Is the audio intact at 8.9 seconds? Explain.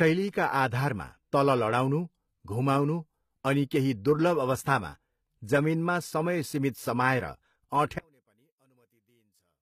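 No. At 8.9 s the sound has almost disappeared. From 7.99 s right through to the end at 9.62 s, the level drops by about 37 dB, leaving only a faint residue. That's most likely one channel inverted: one side of a stereo source had its polarity flipped, so when the two were summed to mono, everything they shared cancelled. What you're hearing is just the small mismatch between them.

On top of that, there's plainly audible codec damage, which holds for the whole clip, including this moment. It sounds like HE-AAC compression, likely at a low bitrate around 20 kbps. Only the lower spectrum is actually coded. The treble is rebuilt by copying lower bands upward and shaping them with a coarse envelope, so the top end isn't the original and its harmonics don't line up across the crossover. Nothing reaches above 14.9 kHz.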